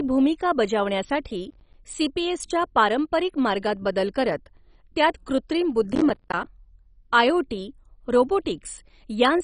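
Throughout the speech the sound is dull and gurgling. Nothing is heard above 10.4 kHz. The remaining bands sound grainy and coarse, and they seem to flicker in and out. This is heavy damage, likely from MP2 compression at a low bitrate, around 32 kbps. The coder splits the signal into sub-bands and has too few bits to share. It shuts off the top bands and quantises the rest roughly.

From 1.50 to 1.74 s there is a short burst of processor overload crackle. The processor missed its deadlines for short audio buffers, around 10 ms each. Only a handful were missed. Each miss left a hard-edged gap of silence. Together the gaps sound like a brief gritty tearing. A longer burst runs from 5.93 to 6.46 s. Many more deadlines are missed there, so the crackle lasts longer before it clears.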